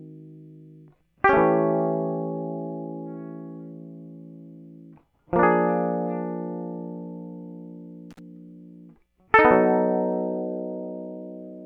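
At 8.11 to 8.20 s an intermittent contact, a loose cable or plug, briefly loses connection, opening the signal path for about 49 ms. The music drops out abruptly, with crackle at each edge of the gap and faint hiss remaining while the line is open.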